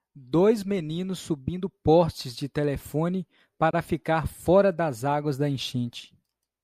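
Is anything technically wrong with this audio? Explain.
Yes. From 3.71 to 3.73 s there is a gap at a join of encoded pieces. Untrimmed encoder padding leaves a 25 ms gap with smeared edges. The speech then resumes.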